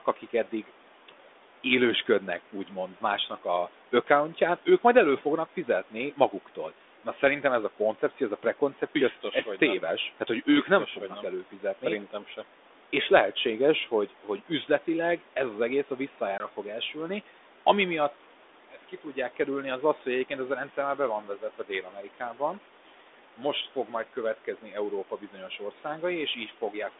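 At 16.38 to 16.47 s, between "ez az egész a" and "fog elsülni ami miatt", packet loss on an ADPCM call leaves a hard-edged hole of about 20 ms, which fits two lost packets. The decoder's predictor and step size lose track of the sender's, so the speech comes back with brief distortion before settling.

From 21.41 to 22.41 s, just after "rendszer már be van", the noise suppressor cuts speech, treating parts of it as background. Roughly 400 ms in total is pulled down, by about 10 dB at the deepest, so the affected sounds come out swallowed and faint.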